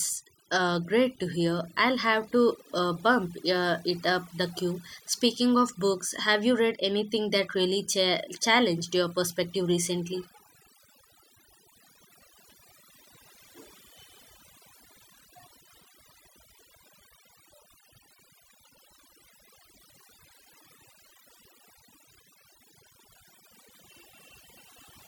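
Overdone noise removal runs through the whole speech clip. A noise reduction stage set too aggressively is cutting individual frequency bands whenever they sit close to its noise estimate, taking quiet parts of the voice with them, so the background drops and breaks up into twinkling specks.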